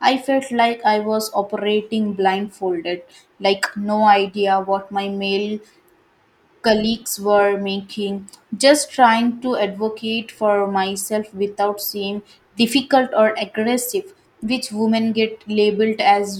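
No technical faults are audible anywhere in this recording.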